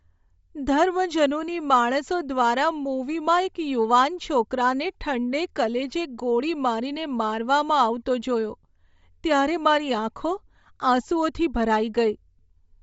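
Throughout the speech, the top end sounds breathy and grainy, with fine high detail swapped for shaped noise, most likely Bluetooth LC3 compression, which fits about 32 kbps and 10 ms frames. Unlike a plain low-pass, the highs aren't dull but hissy and smeared.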